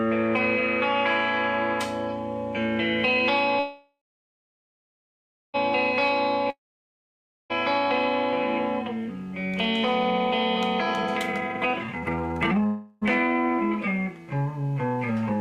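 From 3.59 to 5.56 s there is a call audio freeze, likely caused by packets held up in transit until the jitter buffer emptied. The last sound is stretched into a fading buzz, then about 1.5 s of silence, before the audio resumes exactly where it stopped. Nothing is lost, but everything after arrives nearly 2 s later.

From 6.50 to 7.52 s comes a long network dropout, likely from audio that never reached the receiver. A brief fading buzz gives way to about 0.9 s of silence, and the sound returns a full second further on, with that second gone.

From 10.81 to 12.66 s a jitter buffer speed-up trims the backlog by repeatedly cutting pitch-period-sized slices, roughly one and a half seconds in total. The sound plays at 176% speed with unchanged pitch, and it feels rushed.

Straight after, from 12.66 to 13.04 s, a second, shorter call audio freeze, likely from another stall in packet delivery, fills 0.35 s with a continued buzz that never reaches silence. 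The audio then picks up without loss.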